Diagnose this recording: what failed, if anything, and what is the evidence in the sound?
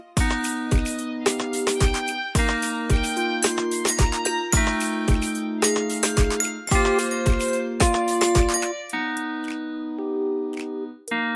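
Nothing failed; no stage shows any audible fault.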